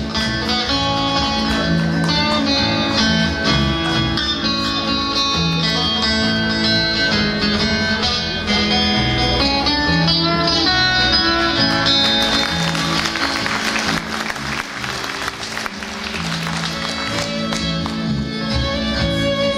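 CD scratch ticks run from 5.02 to 5.70 s: five short, evenly spaced clicks, about six a second, none longer than about a millisecond. A scratch or blemish on the disc surface has wiped out more data than the error correction can reconstruct, and it passes under the laser once per revolution. Each time, the player conceals the damaged samples by interpolating or muting them, leaving a tiny regular tick in the sound.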